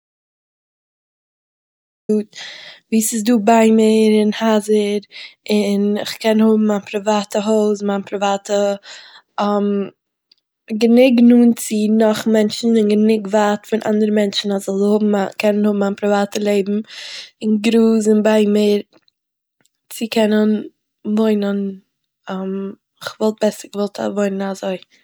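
From the start to 2.09 s there's an audio dropout to silence: plain silence, no room tone, likely a lost input or stray mute, before speech kicks in.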